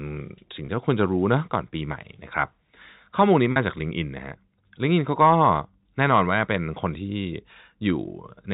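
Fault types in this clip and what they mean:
Packet loss with pitch repetition: at 0.66 s (20 ms) and 3.52 s (40 ms) missing audio was filled by looping the last pitch period, giving a brief held buzz. The waveform shows identical repeated cycles, and the spectrogram shows flat, frozen harmonic stripes.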